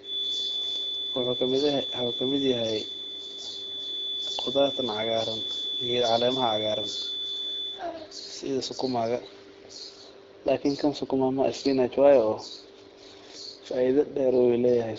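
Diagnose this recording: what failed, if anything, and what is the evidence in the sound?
Likely a loudspeaker-to-microphone loop held at the edge of oscillation: a steady 3.5 kHz feedback whistle sits just under the speech from 0.0 to 7.85 s, before "sidi sukumaga".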